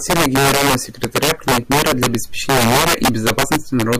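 Speech, marred throughout by integer overflow: pushed about 6 dB past full scale, the loudest peaks, a small share of samples, wrap to the opposite sign instead of limiting, giving harsh cracks. The waveform shows spikes flipping rail to rail; the spectrogram shows broadband vertical streaks.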